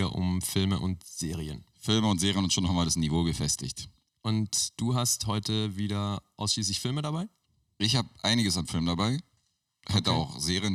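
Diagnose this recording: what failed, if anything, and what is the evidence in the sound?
No fault detected anywhere.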